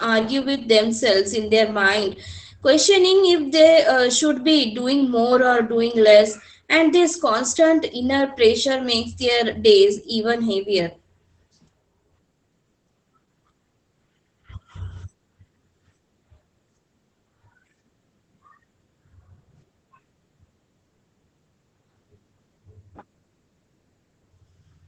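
Speech clip with Opus voice compression throughout: SILK-mode wideband coding caps the band near 8 kHz, and coarse excitation coding makes speech muffled, hoarse and slightly robotic, consistent with roughly 12 kbps.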